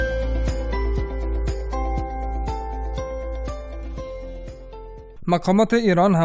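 Nothing is technically wrong with this audio.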